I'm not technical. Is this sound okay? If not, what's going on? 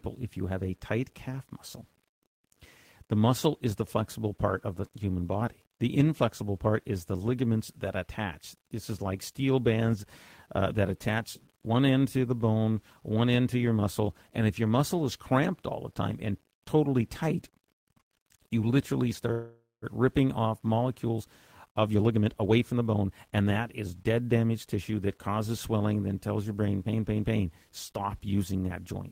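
No. The whole recording has a grainy roughness that follows the speech, especially in quieter moments, most likely from low bit depth without dither, meaning the sound was stored with too few steps.

At 19.31 s, right after "you literally", the speech freezes into a fading buzz, then silence, for about half a second. This is a call audio freeze: likely delayed network data left nothing to play, so the pause was filled and the speech resumed.

From 21.71 to 24.77 s, just before "that causes swelling then", the talking sounds rushed, about 17% faster at the same pitch. This is a jitter buffer speed-up: tiny slices, about half a second in total, were trimmed to catch up.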